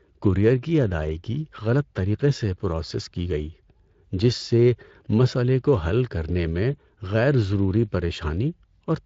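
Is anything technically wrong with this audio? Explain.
Yes. Speex codec damage runs through the whole speech clip and is plainly audible. This CELP coder rebuilds speech from a predicted filter and a coarsely coded excitation, and at this setting the excitation is starved of detail. The voice comes out hoarse and grainy, consistent with a mid-range Speex mode near 20 kbps. On a spectrogram, the harmonics look smeared and noisy between formants. The waveform looks rougher, less periodic.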